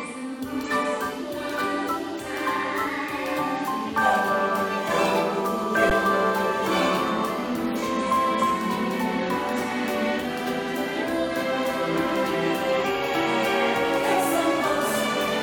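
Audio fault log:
5.90 s, underrun with held sample: the output buffer ran dry for about 11.6 ms, fitting a 512-sample buffer, and the converter froze on its last value, so the sound briefly flattens and stops almost silently, then resumes where it left off with only a soft edge.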